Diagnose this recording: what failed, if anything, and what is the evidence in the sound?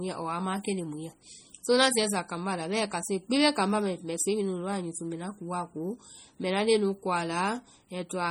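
The codec stage is the problem. Throughout the speech the sound has a watery, swirling quality, with s sounds turning metallic and chirpy and consonant attacks smeared rather than crisp. This is heavy damage, most likely from MP3 compression at a low bitrate, which fits roughly 32 kbps. Starved of bits, the encoder zeroes weak frequency lines, and they flicker on and off between frames, producing the swirl and the chirps.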